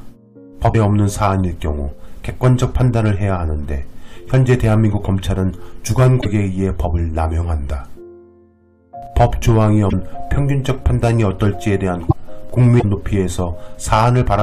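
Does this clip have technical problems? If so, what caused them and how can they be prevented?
Yes. Broken MP3 bit reservoir: brief glitches at 0.72–0.75 s, 6.21–6.26 s, 9.89–9.93 s, 12.08–12.13 s and 12.79–12.84 s, each 30 to 54 ms long, which fits one or two MP3 frames of about 26 ms. The sound briefly breaks up and skips ahead. The likely cause is frames lost from the stream. The frame after each gap looks back into the reservoir for its borrowed data, finds bytes from a different frame, and decodes garbage until the reservoir refills. To prevent it, deliver or cut the MP3 stream only at intact frame boundaries so that no frames are dropped.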